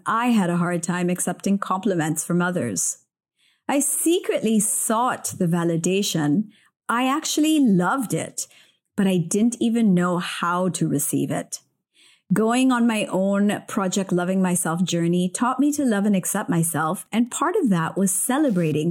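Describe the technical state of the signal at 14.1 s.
At 14.1 s the speech signal is intact, with no technical fault present at that moment.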